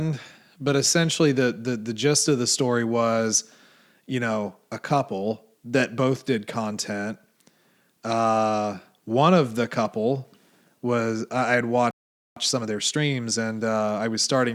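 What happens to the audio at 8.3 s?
Nothing goes wrong at 8.3 s; the speech carries on intact through that moment.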